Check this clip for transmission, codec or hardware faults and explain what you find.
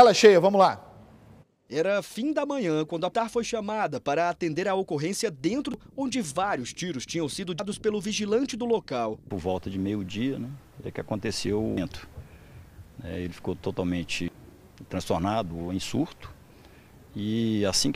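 The clip has one recurring fault: damaged data in a compressed stream. It strikes five times, at 3.14, 5.74, 7.60, 11.77 and 14.28 s. Each event is brief and isolated. At each point, part of the compressed data is wrong. The decoder misreads or rejects the affected frames, loses sync and hunts for the next valid frame header. Each time, the fault is heard as a short chirp, squawk or blip that breaks into the sound.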